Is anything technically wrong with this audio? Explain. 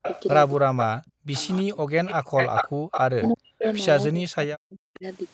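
Yes, the speech carries several call-processing faults.

Echo leak: The far end's echo canceller likely let part of its loudspeaker pickup through. From 0.02 to 0.22 s and 0.80 to 0.84 s, a copy lags by 324 ms at around 10 dB below the speech. From 1.4 to 3.76 s, a stronger copy trails by 399 ms, only around 5 dB down.

Speech suppressed in double talk: From 0.68 to 1.86 s and 3.11 to 5.05 s, the canceller likely mistook the talker for echo while both sides spoke and attenuated everything. The voice dips or cuts out in pieces by as much as roughly 40 dB, for about 0.7 s and about a second in total.

Background gated by the echo canceller: Between 2.23 and 2.83 s, the canceller clamped the microphone while the loudspeaker played. The room sound drops by about 40 dB for roughly a fifth of a second overall, then returns once the gate releases.

The band limit at 8 kHz fits Opus at 32 kbps on the call path.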